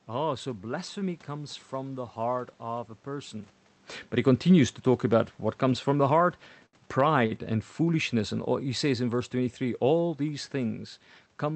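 Speech, carried over an Opus call path whose top end stops near 8 kHz, which fits a modest call bitrate around 32 kbps. There are two short stalls from a late packet. The first runs from 6.66 to 6.75 s. The second runs from 7.26 to 7.33 s. Each time a packet arrived late and the jitter buffer emptied. The receiver held the last sound for about 71 ms, then about 45 ms, until the data came in. Nothing is lost. The sound is simply drawn out, and playback falls that much further behind. The second fault is automatic gain falling. From 6.86 s to 10.47 s the gain control judged the input too loud, or its background noise too strong for the gain it started with. It eased its gain down by about 5 dB. The speech and the room noise behind it sink together over those seconds. The level changes near 3.5 s and 11.5 s are the talker moving relative to the microphone.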